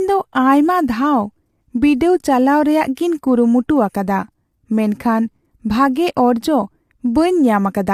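From the start to the end, the speech has a rough, grainy texture, with hiss filling the gaps between the harmonics and a thin top end. That's likely low-delay AAC compression (AAC-ELD), whose short frames blur pitch detail, and the damage suggests a lean bitrate near 32 kbps.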